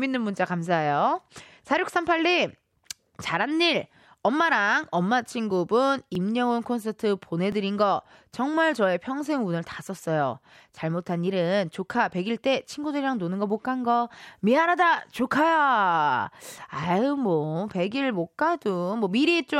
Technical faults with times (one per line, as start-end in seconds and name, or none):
6.15 dropped buffer (overrun)
7.52 dropped buffer (overrun)
12.70 dropped buffer (overrun)